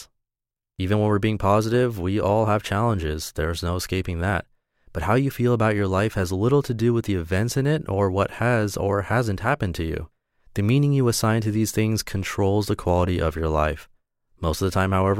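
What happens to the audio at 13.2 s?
At 13.2 s the speech carries on intact, with no dropout, click, distortion or other fault at that moment.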